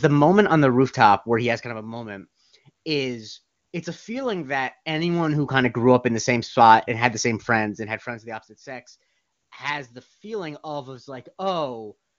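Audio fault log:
No faults found in this speech recording.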